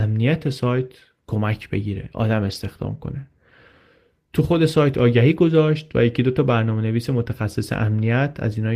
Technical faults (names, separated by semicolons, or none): lost packet rebuilt from error correction